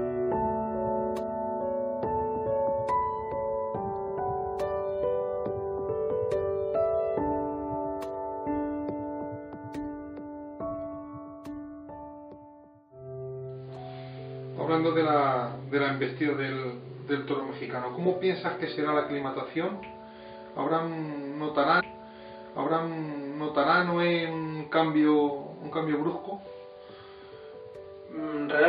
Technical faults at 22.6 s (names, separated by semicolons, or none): stream segment repeated